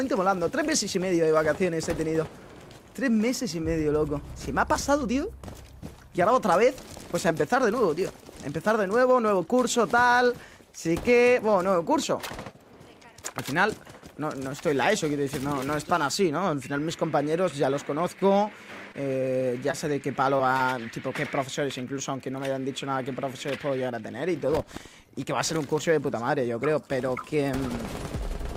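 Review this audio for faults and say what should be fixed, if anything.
Short concealed packet loss at 18.19, 18.92, 19.71, 20.37 and 20.57 s: each 20 ms gap is bridged by continuing the preceding sound, leaving brief smears or wobbles. A deeper jitter buffer or forward error correction on the network path would prevent these dropouts.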